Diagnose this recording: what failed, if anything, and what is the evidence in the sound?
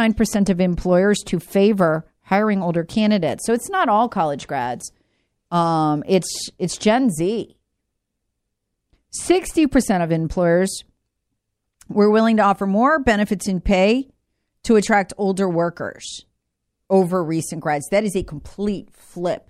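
Nothing failed: no stage in the chain leaves any audible evidence of a fault in this speech recording.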